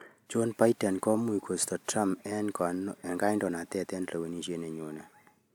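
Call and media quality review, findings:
Nothing stood out on listening through this speech recording.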